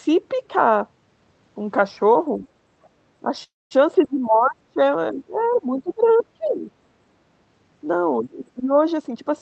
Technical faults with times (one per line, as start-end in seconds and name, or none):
2.42-2.48 other side's voice leaking through
2.85-2.89 other side's voice leaking through
3.43-3.73 call audio freeze
3.95-4.78 speech suppressed in double talk
5.11-6.66 speech suppressed in double talk
5.88-5.92 other side's voice leaking through
6.44-6.49 other side's voice leaking through
8.21-8.72 speech suppressed in double talk
8.97-9.36 jitter buffer speed-up